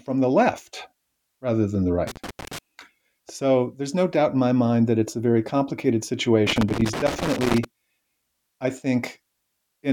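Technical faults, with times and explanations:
2.07–2.58 s and 6.47–7.64 s, loose connector crackle. Two irregular bursts of crackle and scratching break into the speech. The first follows "left rather than the" and lasts about half a second. The second follows "it's a very complicated" and runs for about 1.2 s. A worn or dirty contact is making and breaking rapidly as it shifts. Each break chops the signal, so the sound turns ragged and scratchy.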